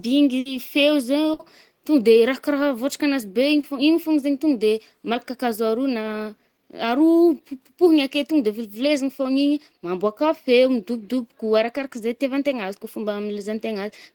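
Speech clip with two bursts of packet loss right at the start, at 0.39 to 0.47 s and again at 1.33 to 1.41 s. Each time a run of packets didn't arrive in time, so the receiver kept the last sound going for about 60 ms, fading it down into a held buzz or hiss, and then picked up further along. Another 60 ms of real audio is simply gone, so you hear a little jump. Later there's a short concealed packet loss at 3.61 to 3.65 s. Here only about 20 ms went missing, and the decoder papered over it by extending the previous sound and blending back in. It comes across as a quick smear or wobble rather than an obvious gap, though anything very brief in that slot can get swallowed.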